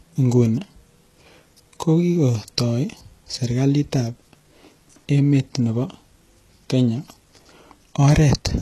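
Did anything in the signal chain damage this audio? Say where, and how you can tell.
Yes. The damage sits at the codec stage and runs through the whole speech clip. The treble sounds synthetic, and s sounds come out gritty and lispy. Nothing is present above about 12.3 kHz. This is likely HE-AAC compression at a low rate, which fits something near 16 kbps. The core coder keeps only the lower spectrum. Spectral band replication then copies those bands upward under a coarse envelope, so the upper harmonics no longer line up.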